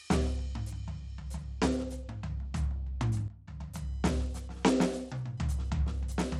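Across the whole music clip the treble is thin and unsteady, with gritty, grainy noise on the sound and nothing above 16.1 kHz. The cause is likely Bluetooth SBC compression: its coarse sub-band coding starves the upper bands of bits, which fits a low bitrate around 96 kbps.

From 3.28 to 3.48 s the level abruptly drops by about 12 dB, music and background together, then comes back. This sudden gain jump is likely a digital gain setting applied instantly, without any ramp.

From 3.76 s to the end, a faint buzzing chirp pulses around a thousand times per second, roughly 40 dB below the music. This is computer activity noise: processor or peripheral load currents disturbing the shared ground and leaking into the audio path.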